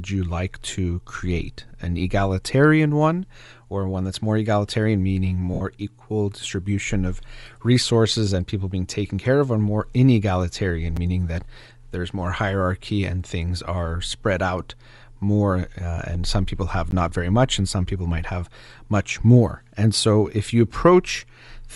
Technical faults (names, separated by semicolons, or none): Bluetooth LC3 compression; lost LE Audio frames; block of digital silence